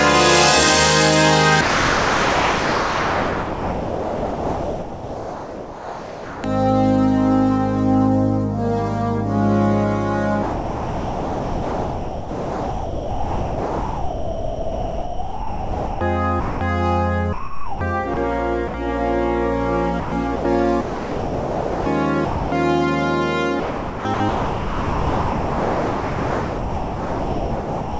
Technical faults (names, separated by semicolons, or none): sound dropped by the voice detector; sound chopped by the voice detector